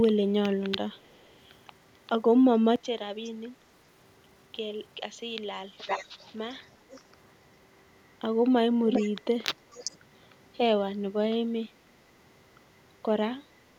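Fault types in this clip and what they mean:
Echo leak, at 0.95–1.35, 3.24–3.31, 5.78–6.31, 6.5–6.56, 6.92–7.01, 8.91–9.1 and 9.71–9.97 s: a copy of the speech returns 405 ms late, faint in most scraps but nearly as loud as the speech near 5.8 and 8.9 s. This is likely a far-end loudspeaker feeding a microphone whose echo canceller failed to remove it.
Input switched to a poorer device, 2.76 to 6.81 s: with no gap, the level drops by about 10 dB, the band narrows and a faint new background noise appears, before the fuller sound returns. This likely reflects a change to another microphone or a headset's call profile.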